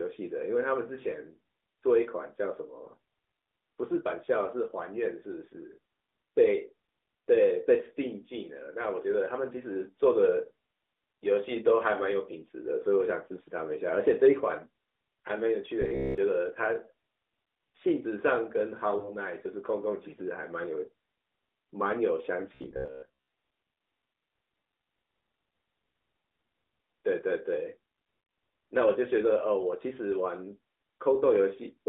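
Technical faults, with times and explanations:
15.82–16.18 s and 22.55–23.28 s, robotic sound from repeated short buffers: the speech turns into a rigid, metallic buzz at about 66.8 Hz. That pitch fits a chunk of roughly 15 ms replayed over and over, likely because audio arrived too late. Most of the real sound is skipped.
18.98–19.14 s and 23.50 s, lost AMR speech frames: the first gap loses two 20 ms frames, the second one frame. The AMR-NB decoder fills in by reusing its last good settings at falling gain, so the sound smears briefly, dips, and returns rough for a moment.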